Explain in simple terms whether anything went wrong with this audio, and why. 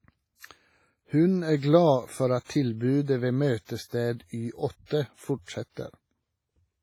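WMA compression damage runs through the whole recording. The speech sounds smeared and ringing, with a hiss that swells and fades along with it. The likely cause is heavy squeezing of the file, so the encoder blurs detail across short stretches and throws away quieter parts.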